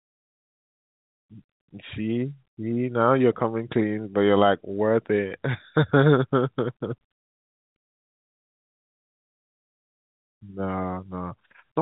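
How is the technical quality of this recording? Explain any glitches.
The technical quality of this speech recording holds up, with no glitches to explain.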